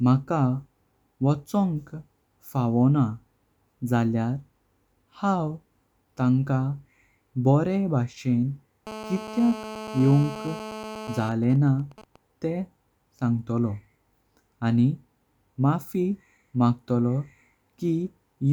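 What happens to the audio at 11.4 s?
At 11.4 s you're inside a short patch of GSM signalling bursts, running from about 11.32 to 12.16 s. A nearby 2G phone in a call, its user silent, emits grouped radio bursts that the audio circuit rectifies into even ticks with a longer 217 Hz buzz twice a second, roughly 20 dB under the speech.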